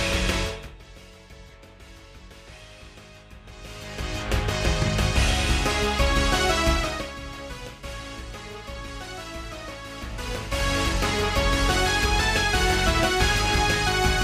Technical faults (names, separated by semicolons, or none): none